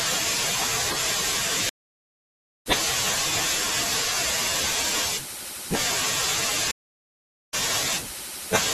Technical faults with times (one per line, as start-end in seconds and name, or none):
1.69-2.67 stream reconnect
6.71-7.55 stream reconnect